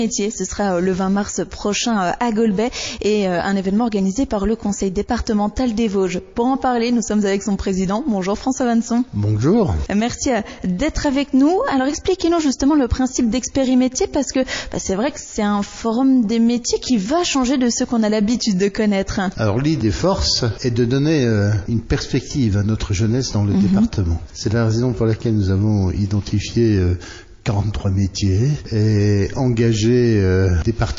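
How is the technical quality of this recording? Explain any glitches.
The recording is limited by plainly audible codec damage. MP3 compression, present throughout, is the likely cause: the encoder seems starved of bits, which fits a low bitrate around 32 kbps. It clips the treble at a fixed ceiling and drops weak frequency lines frame by frame, leaving a watery, swirling texture with metallic chirps on bright sounds and smeared attacks.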